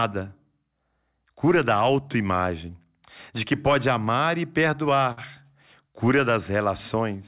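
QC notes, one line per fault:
5.12–5.19 s, short stall from a late packet: one packet arrived late, so the jitter buffer ran dry and the receiver stretched the last sound for about 51 ms before resuming exactly where it stopped. The held sound lasts too long, with a slight buzz or dip, and everything after it is delayed by that 51 ms. Nothing is skipped. That separates it from a lost-packet dropout, where the stream jumps ahead over missing sound.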